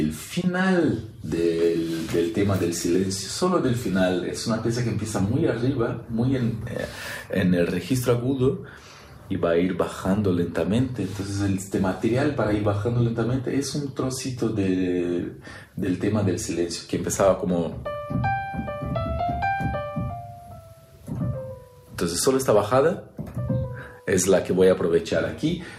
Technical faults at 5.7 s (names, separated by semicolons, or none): DAB burbling